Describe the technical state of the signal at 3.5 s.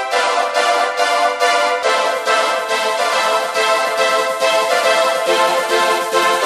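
At 3.5 s the signal is intact, with no audible technical fault at that point.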